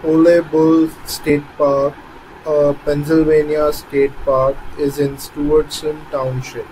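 At 1.30 s the speech briefly jumps forward, losing around 70 ms of sound. This is compressed frames skipped: the decoder never played that stretch, which fits about two 32 ms frames dropped from the stream.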